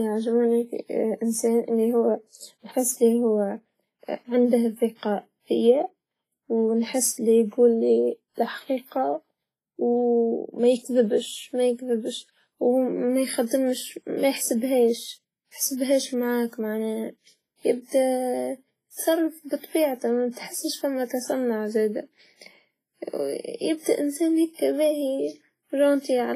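Throughout this speech recording the sound is washy and ringing, with a hiss that swells and fades along with the signal and no content above 15.3 kHz. That points to WMA compression, likely at a low setting, around 24 kbps, where a transform codec's long blocks smear quantisation noise over time and drop weak detail. Just after "يتصرف بطبيعته", from 20.31 to 20.37 s, a brief hiss of about 55 ms arrives ahead of a sharp attack, softening it. This is pre-echo: noise meant for the loud onset is spread back across the quiet part of the same block.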